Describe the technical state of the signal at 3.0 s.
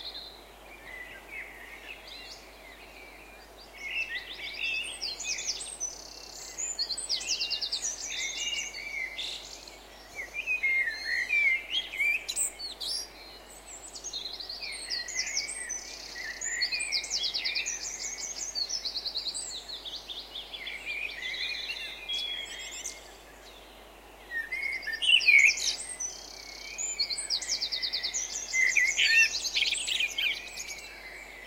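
At 3.0 s the signal is intact, with no technical fault audible at that moment.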